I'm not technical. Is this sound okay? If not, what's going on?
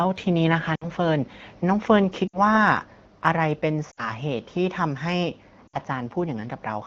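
No. The speech briefly drops away four times: at 0.75 to 0.86 s, 2.28 to 2.39 s, 3.91 to 4.11 s, and 5.67 to 5.78 s. Each time the voice drops to near silence for a split second, then returns a little weak or rough. These are lost AMR speech frames. Radio errors on this HD Voice phone call corrupted small chunks of speech, and the decoder filled each gap by replaying the last good sound while fading it down.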